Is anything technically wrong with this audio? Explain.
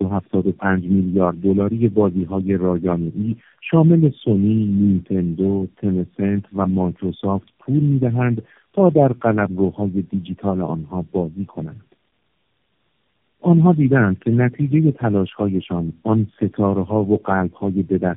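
Yes, there's tandem speech coding running through the whole clip. The speech sounds like it passed through several low-bitrate narrowband codecs one after another, probably a mix of AMR-style and G.729-style coders bridged by G.711 links. Each hop decodes and re-encodes what the previous one already mangled, so the damage stacks. You hear it as rough, muffled, warbly speech with nothing above about 3.6 kHz, noticeably worse than any single codec would leave it.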